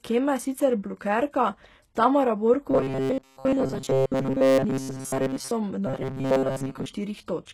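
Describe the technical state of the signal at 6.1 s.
At 6.1 s the speech sits inside a rigid metallic buzz at 133 Hz running from 5.87 to 6.86 s. That is robotic sound, likely from repeated short buffers: about 7.5 ms of audio looped while most of the real signal is skipped. Unlike codec grit, this imposes a buzz at one fixed rate.

Underneath, the whole clip shows heavy HE-AAC compression, likely at a low bitrate near 16 kbps. The synthetic treble makes s sounds gritty and lispy rather than buzzing at a set pitch.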